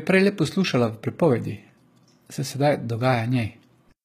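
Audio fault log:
throughout, HE-AAC compression: the treble of this speech is rebuilt by band replication rather than coded, so s sounds come out gritty and lispy with plainly audible damage, and nothing above 14.9 kHz. The damage fits a low bitrate around 20 kbps and is likely from HE-AAC coding. Unlike a plain lowpass, the top stays bright but mismatched.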